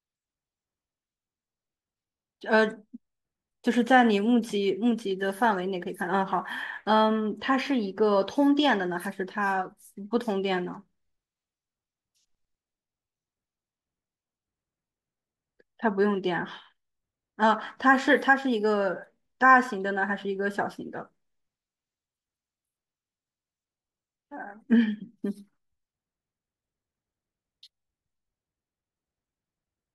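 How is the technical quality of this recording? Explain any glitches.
One stretch of the speech carries an audible fault. From about 3.8 to 7.2 s, a fine hiss and grainy roughness ride on top of the speech. They swell on louder passages and sharp, bright sounds like sibilants and disappear in the pauses. This is sample clock jitter: the converter's timing wobbles by roughly a microsecond, so each sample lands slightly off its proper instant. Steep, fast-changing parts of the waveform suffer most, leaving an error around 45 dB below the signal.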